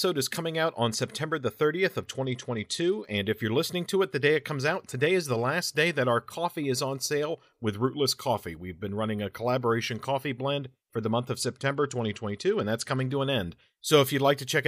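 From 2.00 to 3.18 s, ending just before "if you're listening to", and again from 11.42 to 13.11 s, between "for the month of" and "to an end", the speech turns dull and gritty. This is a Bluetooth SBC bit pool drop, consistent with the bit pool falling from 31 to 12 (around 88 kbps), which starves the treble and coarsens the rest. Unlike packet loss, the sound never cuts out.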